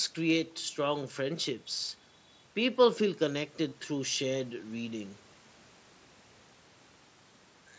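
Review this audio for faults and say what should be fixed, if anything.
At 3.69 to 3.72 s the speech has a concealed Bluetooth headset packet loss. About 22.5 ms of audio never arrived from the headset, which points to three consecutive 7.5 ms mSBC frames. The receiver filled the hole by repeating the closest-matching recent stretch of waveform, giving a brief buzzy, held sound and a faint warble where real audio resumes. A plain dropout would leave silence or a click. Improving the radio link, by reducing distance, obstructions and 2.4 GHz interference, should prevent it.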